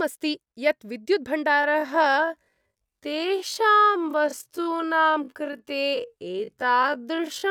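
A time-stretched section runs from 1.50 s to the end of the clip, where the speech abruptly drops to half its pace while its pitch stays unchanged. This likely comes from software lengthening the audio by repeating short pieces, so the speech drags.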